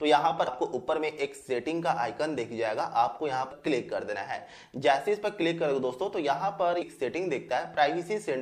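Damaged data in a compressed stream causes brief glitches at 0.47 s, from 3.51 to 3.53 s, and at 6.81 s. Corrupted bytes make the decoder misread those frames and lose sync until it locks onto the next valid frame header, leaving short blips in the sound.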